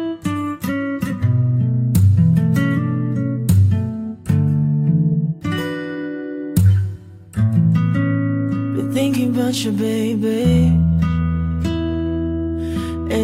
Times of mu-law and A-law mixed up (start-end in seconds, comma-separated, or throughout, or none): none